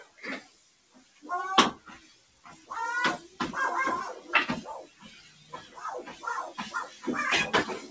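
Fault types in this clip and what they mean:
Noise suppressor applied to music or sounds: Across the whole clip the level pumps and thins out. Held and fading material sinks while onsets punch through, with a swing of roughly 15 dB between what survives and what gets pushed down. A noise suppressor built for speech was left running on this non-speech audio. It treats sustained tones, ambience and reverb tails as background noise and keeps pulling them down.
Sound cut by the noise suppressor: Four stretches dip below their surroundings, at 0.00–0.23 s, 0.42–1.24 s, 1.79–2.70 s and 4.86–5.77 s, falling by about 9 to 11 dB at their deepest. In these passages the suppressor mistook the sound itself for noise and attenuated it harder than the rest, so steady and fading parts lose level while sharp transients mostly come through.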